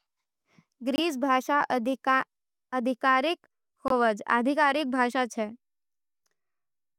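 Around 0.96 to 0.99 s and again at 3.88 to 3.92 s, a packet likely failed to reach the headphones in time, a Bluetooth dropout. Each time the speech cuts to brief silence, losing about 21 ms (roughly one frame), then resumes as if it had played on.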